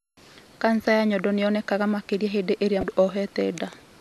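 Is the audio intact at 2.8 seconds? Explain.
No. Just after "nĩyonekaga makĩria hĩndĩ irĩa", from 2.80 to 2.83 s, the speech suffers damaged data in a compressed stream. A short stretch of the encoded bytes is corrupt, so the decoder misreads or rejects those frames, loses its place in the stream and hunts for the next valid frame header before resuming. For roughly 30 ms the speech is replaced by a brief chirp, squawk, click or short hole.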